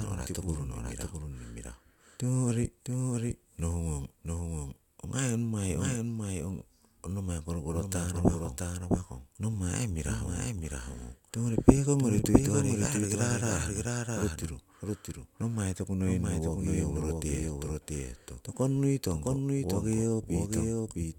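A speech recording with a doubled audio track running the whole way through. Every phrase comes back a second time, roughly 0.7 s later and only about 5 dB quieter, so it sounds like a clean, dry repeat stepping on the original rather than a room echo. The copy is full-band with no decay at all. The likely cause is the same signal being captured twice, once through a slower path that lags behind.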